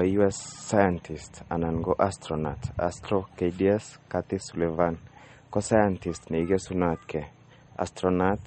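Speech throughout, with plainly audible watery, swirling artefacts and nothing above 8.4 kHz, likely from MP3 compression at a bitrate low enough to point to roughly 35 kbps. A spectrogram would show a flat ceiling at 8.4 kHz and speckled gaps where weak components flicker between frames.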